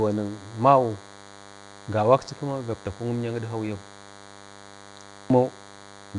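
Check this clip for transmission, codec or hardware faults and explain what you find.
Two faults run through the whole speech clip.

From start to finish, a thin, steady buzz sits under the speech at roughly 25 dB below it, pulsing at 100 Hz with a dense stack of harmonics. This is DECT cordless phone buzz: a nearby handset or base transmits a radio burst every 10 ms, and the audio circuitry rectifies it into sound.

Throughout, the speech also has a rough, hissy halo and a smeared, underwater quality, with nothing above 10.7 kHz. The likely cause is Nellymoser compression, Flash's old microphone codec. It spends a fixed two bits per sample on blocks of 256 samples, consistent with a rate around 44 kbps, and fills the starved bands with noise.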